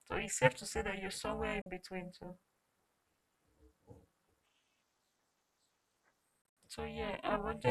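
Across the whole speech clip runs an overlap-add ripple. The frames were rejoined with an overlap that doesn't sum to a constant gain, so the level swings by about 60 dB at around 400 Hz. It is heard as a metallic buzz with extra tones around the voice. A waveform shows a deeply scalloped envelope, and a spectrogram shows dense vertical striping.

At 1.62 to 1.66 s, just before "between too", the audio drops out for about 44 ms, most likely a Bluetooth dropout. At 6.42 to 6.57 s, gaps totalling about 116 ms are scattered over 145 ms, the longest 73 ms. Both look like blank columns, and the speech resumes as if it had played on.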